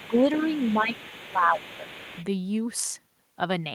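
From 0.0 to 2.25 s the echo canceller likely failed to clear the far end's loudspeaker sound from the microphone, so the other side's voice leaks through underneath the speech, roughly 20 dB below it, sounding like a faint second talker.

Over the same stretch both sides talk at once, and the canceller, likely unable to separate the local talker from that echo, turns everything down. This speech suppression in double talk shows as dips of about 10 dB at 0.0–0.16 s and 0.76–0.95 s, then a deeper, longer drop of about 15 dB from 1.28 to 1.88 s, where the voice audibly sinks.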